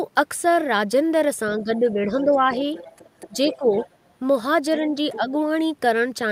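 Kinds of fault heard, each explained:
Speech suppressed in double talk: the talker's level dips at 1.63–2.63 s, 3.27–3.35 s, 3.57–3.71 s, 4.78–4.95 s and 5.16–5.35 s, mostly by about 5 dB but by about 15–20 dB near 3.3 and 3.6 s, likely an echo canceller ducking both sides.
Other side's voice leaking through: a second voice sits under the talker from 2.18 to 3.87 s, about 20 dB down, with a brief scrap at 5.10–5.18 s about 15 dB down, likely loudspeaker sound the echo canceller left in the microphone.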